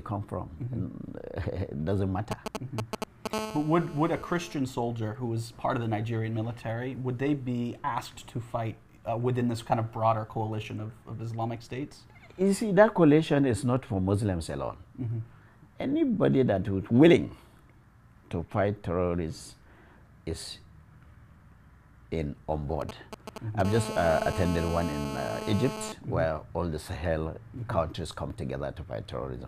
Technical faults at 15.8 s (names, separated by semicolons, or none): none